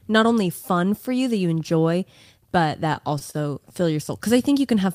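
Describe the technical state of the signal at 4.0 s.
The signal sits inside a stretch of repeated stalls (stutter) from 2.93 to 4.09 s, starting after "that you enjoy but". Packets arrived late, so the jitter buffer kept running dry and the receiver stretched the last sound across seven gaps of up to 29 ms, about 96 ms in total. Nothing is lost, but the audio drags and stutters.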